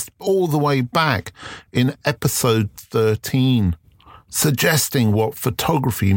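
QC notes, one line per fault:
Nothing to flag on this speech recording; no faults turned up anywhere in it.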